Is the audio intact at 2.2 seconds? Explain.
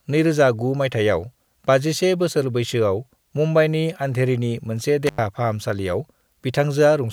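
Yes, at 2.2 seconds the speech plays through intact, with no dropout, click, distortion or other fault audible at that moment.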